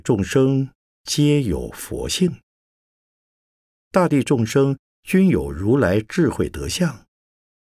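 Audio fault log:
No faults found in the speech at any point.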